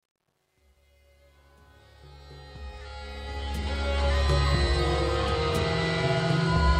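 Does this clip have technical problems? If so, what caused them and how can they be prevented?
Yes. The fade-in from 0 to 4.08 s was computed without dither at too low a bit depth, consistent with about 10 bits. This causes truncation distortion: the music turns gritty, worst from 0 to 2.41 s. Adding dither and keeping higher resolution through the fade stage prevents it.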